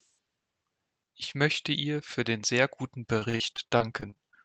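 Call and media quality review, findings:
One channel drops out, 1.24–1.35 s, just before "möchte ihr für den": abrupt level dip of about 6 dB. Likely a stereo leg going missing upstream, so the mono sum keeps only half the shared content.

Repeated packet loss (robotic sound), 3.09–4.35 s, right after "für den sehr guten": choppy stretch with pieces missing. Twelve short gaps, longest 43 ms, roughly a fifth of the span concealed. Probable network/jitter-buffer side: concealment keeps stretching the last sound, then the next hole hits.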